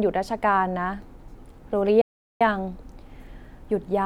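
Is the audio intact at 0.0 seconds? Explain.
Yes, the speech at 0.0 seconds is intact, with no fault heard at that moment.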